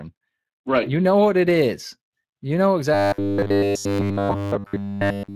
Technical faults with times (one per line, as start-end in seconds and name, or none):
0.00-5.35 Speex codec
2.94-5.35 robotic sound from repeated short buffers